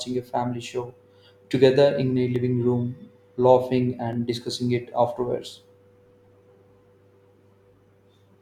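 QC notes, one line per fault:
2.36 s and 4.13 s: dropped samples. Each is a single sharp click in the speech. A fraction of a millisecond of the stream is likely missing, so the waveform jumps abruptly.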